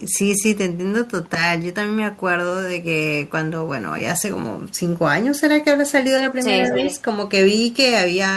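Speech, with an echo leak between 6.63 and 7.01 s: a delayed copy of the voice trails the original by 221 ms, sitting roughly 10 dB below it. The likely cause is a far end on loudspeaker whose echo canceller let part of the returning signal through. Unlike room reverberation, which smears into a smooth decaying tail, this is a distinct, separated repeat at one fixed delay, appearing only in this short stretch.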